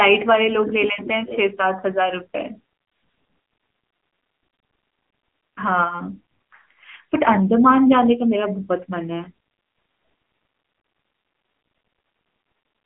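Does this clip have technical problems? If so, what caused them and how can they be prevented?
Yes. Throughout, the speech carries AMR narrowband mobile codec damage: nothing passes above 3.7 kHz, low end thins below about 250 Hz, and the voice sounds plainly buzzy and synthetic, fitting a low mode near 8 kbps. That buzz distinguishes it from plain telephone band-limiting. Prevent it by recording locally or using a wideband, higher-bitrate codec.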